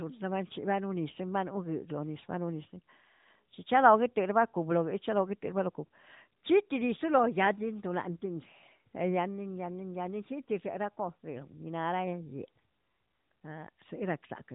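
No faults found in the speech; the AMR-NB mobile codec path at 12.2 kbps leaves only light coding texture, and nothing above 3.8 kHz gets through.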